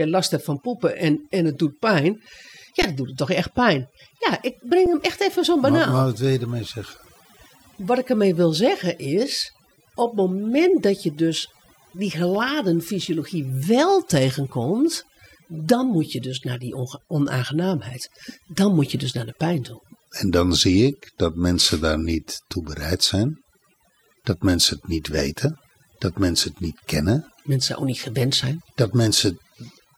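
Across the whole speech clip the background sinks to near silence dotted with twinkling specks. This is overdone noise removal: a noise reduction process set too aggressively pulls individual frequency bands far down or off whenever they sit close to its noise estimate. The quieter parts of the voice fall below that threshold too, so they get stripped away along with the noise.

At 2.82 s the sound abruptly freezes for about 12 ms, and at 4.86 s it freezes again for about 6 ms. Both pauses begin with little or no click and resume softly. These are underruns with a held sample: the output buffer ran dry, and the converter kept outputting its last value, a flat line usually sitting somewhere other than zero, until new data arrived. No audio appears to be missing, so playback picks up exactly where it stopped. The gap lengths fit buffers of 512 and 256 samples.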